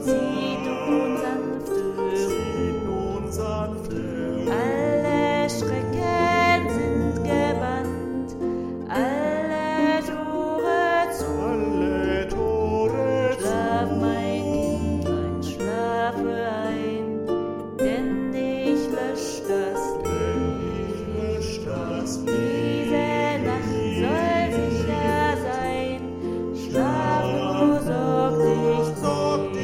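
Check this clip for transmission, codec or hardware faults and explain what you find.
No transmission, codec or hardware problems turn up anywhere in this one, so there's nothing to flag.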